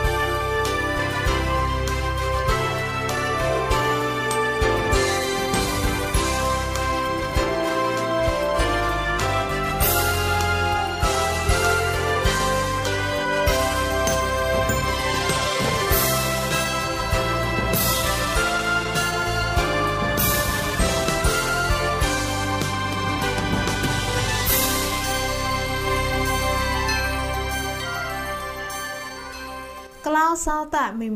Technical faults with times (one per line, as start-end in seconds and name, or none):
none